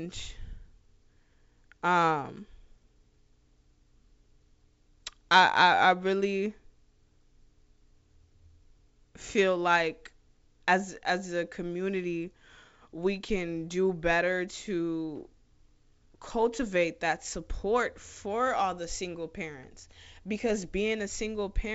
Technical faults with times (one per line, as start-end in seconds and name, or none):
none